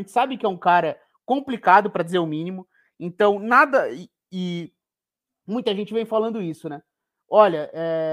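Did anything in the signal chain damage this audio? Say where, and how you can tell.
Yes. From 3.52 s to 4.65 s the speech slows by about 6.1% and drops about 109 cents, just over a semitone. Speed and pitch fall together, then snap back at once. That matched shift points to a drift correction step at the driver or buffer stage. This is likely clock-matching software changing the playback rate in one jump to refill its buffer, then restoring the normal rate.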